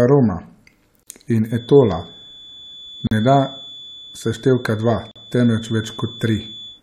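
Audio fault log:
1.03 to 1.07 s, 3.07 to 3.11 s and 5.11 to 5.16 s, gap at a join of encoded pieces: the speech drops into short silences of 39 ms, 43 ms and 43 ms, spaced 2 s apart. Each has edges softened by the codec's smearing, and the speech picks up exactly where it stopped. The audio was encoded in 2-second pieces and joined without removing each encoder's leading delay and final-frame padding, so that padding remains as silence at every join.
1.44 s to the end, feedback whistle: a thin, steady 3.5 kHz tone sits behind the speech about 20 dB below it, swelling and fading slowly in level but never growing into a howl. The likely cause is the loudspeaker-to-microphone loop running just at the edge of feedback, where a single frequency keeps recirculating and sustains itself without gaining enough to run away.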